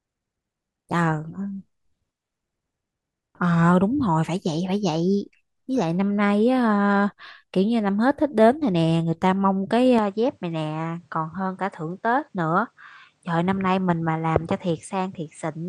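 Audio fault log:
9.99 to 15.69 s, input switched to a poorer device: with no gap at the change, the speech abruptly loses its top end, with nothing above 9.8 kHz, and drops in level by roughly 5 dB. A faint new background noise also appears, sitting far below the speech. This is likely the recording moving to a different, narrower-band microphone, whose own response, gain and noise floor replace the original's for the rest of the clip.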